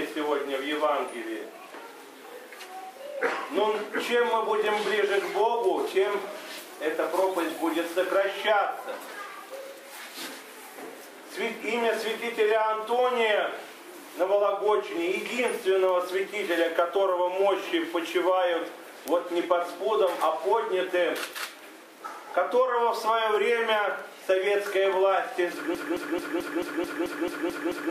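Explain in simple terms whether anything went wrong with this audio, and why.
Near the end, the player or stream likely stalled and kept replaying the last piece it held. This broken-record loop starts at 25.75 s: a fragment of about 0.22 s repeats exactly, ten times back to back, until the clip ends, and the sound that should have played there is lost.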